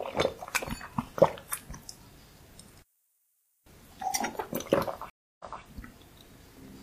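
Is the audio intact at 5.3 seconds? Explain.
No. A stream reconnect spans 5.10 to 5.62 s: the connection dropped, leaving about 0.30 s of silence, then a fresh decoder restarted 0.21 s earlier, fading back in.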